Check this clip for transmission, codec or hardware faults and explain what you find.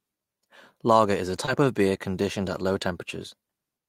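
One transmission fault is present. Between 1.45 and 1.49 s, after "is a" and before "of beer conditioned at", there is short concealed packet loss. About 20 ms of audio arrived too late to decode, and the receiver covered the gap by extending the preceding sound before blending back, heard as a brief smear.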